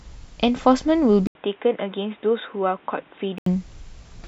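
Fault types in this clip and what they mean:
Input switched to a poorer device: From 1.27 to 3.46 s the speech turns dull and boxy, with nothing above 3.8 kHz. An 80 ms gap marks the switch. Level drops about 5 dB and new noise appears. The cause is likely another microphone or a headset's call profile.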